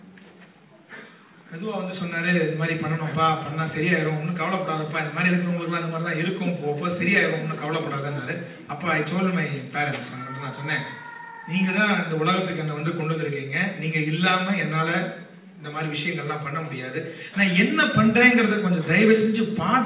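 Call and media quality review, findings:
No faults found in this clip. The audio reaches the listener through the call path with nothing above 4 kHz, which fits a narrowband G.711 mu-law codec at 64 kbps.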